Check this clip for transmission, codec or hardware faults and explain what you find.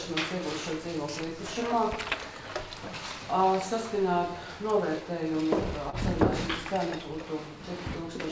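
One transmission fault can be heard: a short concealed packet loss from 5.90 to 5.96 s. About 30 ms of audio did not reach the decoder in time. The receiver filled the hole by carrying the preceding sound forward for 28 ms. It then blended back into the real signal. The result is a brief smear or wobble in the sound. The call path's band limit is also clear, with nothing above 8 kHz, which fits the G.722 codec.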